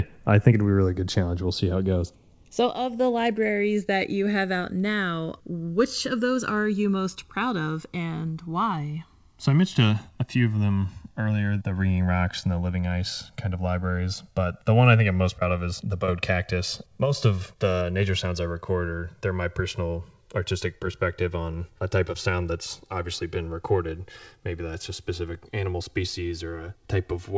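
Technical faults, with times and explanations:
throughout: channels drifting apart. The two channels ran on separate clocks roughly 100 ppm apart, so their delay slides steadily to about 3 ms by the end. In mono, sweeping comb notches give the speech a slow flanging, beneath the call path's 8 kHz ceiling.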